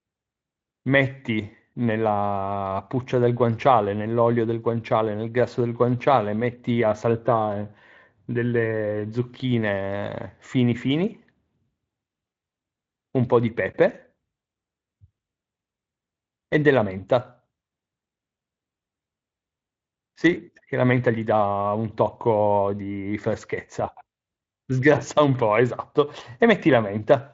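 Nothing stood out on listening to this speech recording.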